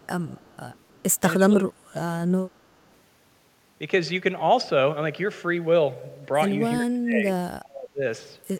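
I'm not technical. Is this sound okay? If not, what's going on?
No. There are two problems, both tied to a phone or video call on a loudspeaker.

The first is an echo leak. The side using a loudspeaker likely has an echo canceller that didn't fully remove what its microphone heard from that speaker, so some of it was sent back. You hear a quiet, delayed copy of speech, trailing about a third of a second behind, from 0.0 to 0.08 s, 0.26 to 0.57 s and 0.73 to 1.16 s.

The second is speech suppressed in double talk. When both sides talked at once, that echo canceller likely couldn't tell the local talker from the loudspeaker echo, so it turned both down. The speech drops sharply in level, nearly vanishing at its deepest, from 1.38 to 2.1 s and again from 6.75 to 8.01 s.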